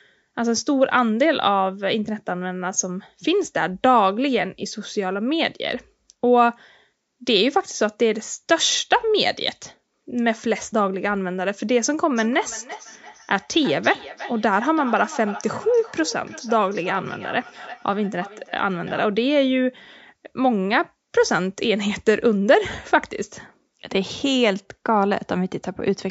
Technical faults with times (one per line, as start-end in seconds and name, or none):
12.16-19.12 feedback echo between two devices